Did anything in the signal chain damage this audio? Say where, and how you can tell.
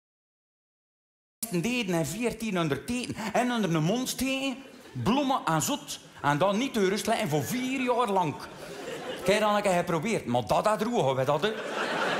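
Yes: a cut-off start. Digital silence runs to 1.43 s, then sound appears mid-event with no attack, showing recording or capture began late and missed the opening.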